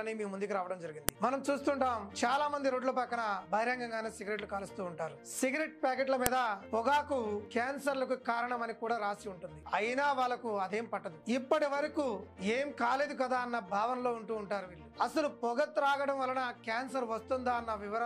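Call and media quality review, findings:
Sharp, loud click at 1.09 s, again at 6.26 s, each about 1 ms, independent of the surrounding sound. File header played as audio: segment joins kept WAV header bytes, decoded as samples. Probable component: concatenation or streaming stage, not stripping headers.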